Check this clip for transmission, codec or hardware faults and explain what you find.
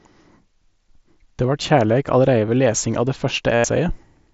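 One transmission fault: concealed Bluetooth headset packet loss from 3.55 to 3.64 s, after "av det". About 90 ms of packets were lost, so the phone looped recent waveform into a held, buzzy tone that warbles as speech returns.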